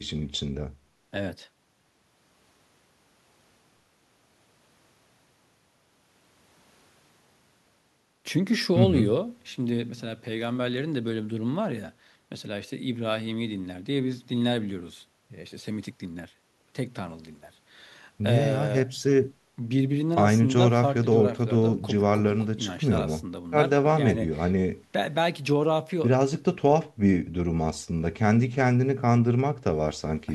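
No technical faults can be heard anywhere in the speech. There is nothing to place on a timeline, as no moment in the recording calls for comment.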